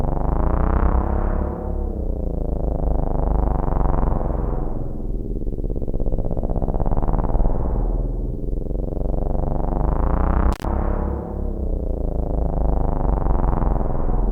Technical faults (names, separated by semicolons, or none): intermittent contact